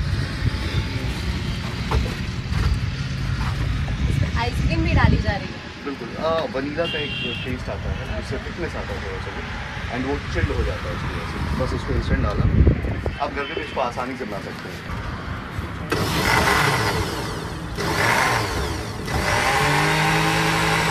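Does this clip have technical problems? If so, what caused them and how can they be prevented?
Yes. There is an overlap between stream segments, heard at 5.99 s and 11.97 s. The segment time stamps overlap at boundaries about 6 s apart, so the player trims the overlap even though that audio was never duplicated. A few milliseconds of real sound are lost and the waveform jumps, producing a brief click or tiny skip at each join. To prevent it, make each segment start exactly where the previous one ends when packaging the stream.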